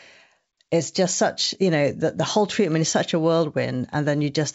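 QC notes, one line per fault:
No faults heard.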